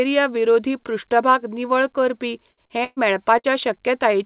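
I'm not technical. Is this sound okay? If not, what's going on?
No. Right after "विरोधी पृष्ठभाग निवळ करपी", the speech starts breaking up, several times in quick succession.

Burst of packet loss, at 2.51 to 2.60 s, 2.84 to 3.00 s and 3.39 to 3.47 s: on a call, the speech travels in small chunks, and here a few chunks in a row failed to arrive in time. The phone covered each hole by stretching out the last sound and letting it fade, so you hear a short held buzz or hiss instead of speech. About 60 ms of speech is lost in the first and third gaps and about 120 ms in the second, which also drops to silence for a moment before the speech returns.

Short concealed packet loss, at 2.66 to 2.72 s: this is a smaller version of the same problem, with only about 30 ms missing. The phone patched it by continuing the sound that came just before and then blending back into the real speech, so it comes across as a quick smear or wobble rather than a clear gap. 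The call line also keeps nothing above 4 kHz, which makes the speech sound somewhat muffled throughout.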